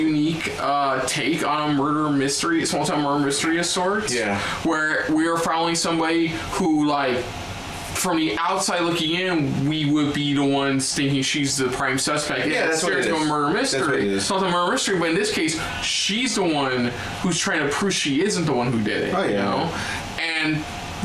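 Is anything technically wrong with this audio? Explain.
No, nothing is technically wrong with this audio.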